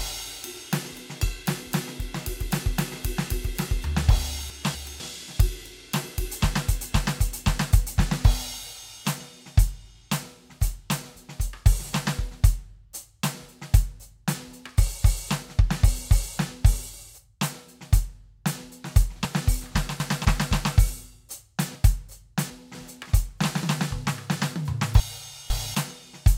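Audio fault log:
4.5–5.0 s, 19.25–20.25 s, 21.75–22.75 s and 25.0–25.75 s, chunks out of order: in each span a 250 ms block of the music plays late, one block behind at 4.5 s, three at 19.25 s and 21.75 s, and two at 25.0 s. The passage comes out jumbled, with three hard joins. Unlike a dropout or a stutter, no material is missing or repeated, only shuffled.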